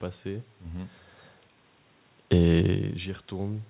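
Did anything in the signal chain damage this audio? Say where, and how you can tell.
No, nothing in the chain damaged this one; the level changes around 1 s and 2.5 s are just the talker moving relative to the microphone, and the top end stopping near 4 kHz is simply what a G.711 call path sounds like.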